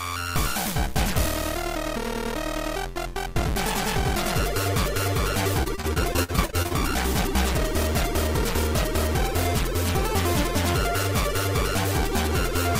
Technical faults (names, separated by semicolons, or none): repeated packet loss (robotic sound)